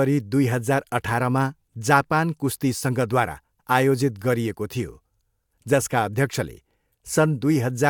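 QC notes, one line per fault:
No faults heard.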